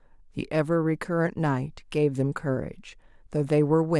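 Speech recording, with no audible technical faults at any point.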